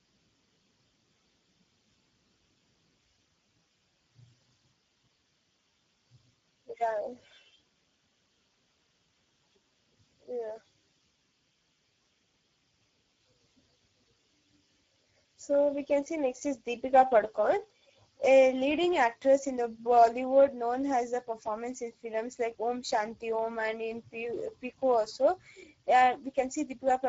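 Speex codec damage runs through the whole clip, from start to finish. This CELP speech coder rebuilds each stretch of speech from a predicted spectral envelope plus a coded excitation. Here the excitation is given too few bits, so the speech comes out plainly hoarse and noisy. The sound points to a low setting of roughly 10 kbps. Nothing is present above 7.7 kHz, which caps the brightness.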